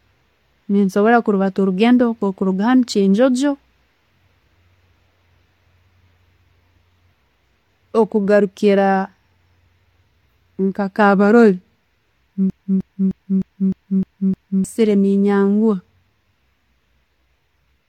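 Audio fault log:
12.50–14.65 s, broken-record loop: a 306 ms fragment of the speech repeats exactly, back to back, seven times over roughly two seconds, giving a mechanical stutter with identical attacks at each restart. The playback or stream path has likely stalled and kept re-sending the last buffered fragment instead of advancing. Whatever speech should have filled those two seconds is missing, and the audio resumes afterwards with that gap unrecovered.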